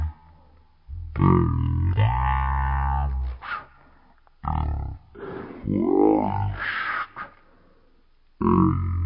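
Speech plays throughout at about a third of its proper speed and about 19 semitones low, the mark of a wrong sample rate, which fits 48 kHz audio played at 16 kHz. Because speed and pitch fall together, it differs from a pitch shift or time-stretch.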